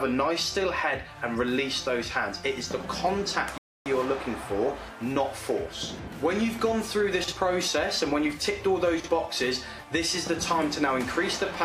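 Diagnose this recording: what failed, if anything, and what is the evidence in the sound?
Playback buffer ran dry: a rebuffering stall at 3.58 s. The sound drops to silence until 3.86 s, then picks up exactly where it left off. Nothing's missing, but roughly 280 ms of dead air gets inserted while the player waits for more data.

Two spots of chunks out of order, at 7.24 s and 9.00 s, each a 40 ms piece arriving one chunk late and playing after its successor. You hear a brief jumbled stutter across the three hard joins. It's a delivery or write-ordering fault.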